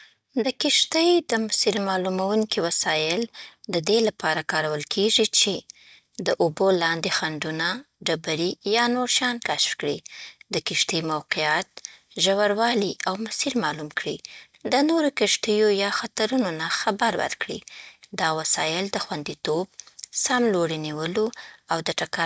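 No technical faults are audible anywhere in the recording.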